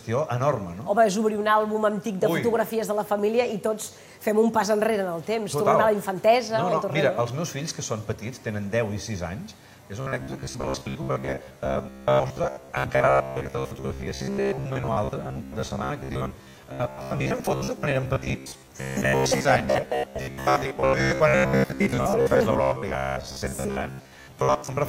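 From 10.01 s to the end, the sound turns rigid and metallic, buzzing near 66.7 Hz: robotic sound, likely from a 15 ms buffer repeated to fill most gaps.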